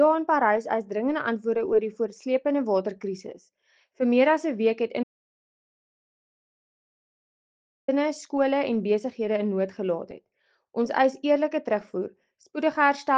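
At 5.03 s the sound cuts off into silence until 7.88 s, an audio dropout to silence lasting 2.85 s, likely from the input briefly disconnecting while recording continued.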